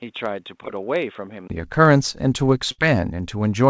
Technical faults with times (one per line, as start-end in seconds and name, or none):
0.00-3.69 block size mismatch (truncated)
0.00-1.50 input switched to a poorer device
2.72-2.80 burst of packet loss